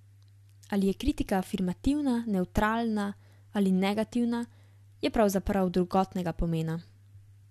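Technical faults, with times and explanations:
No technical faults can be heard anywhere in the speech recording.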